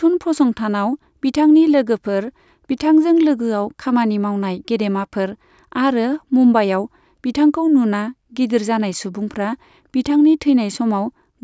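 Nothing in the recording stood out as a technical problem on listening.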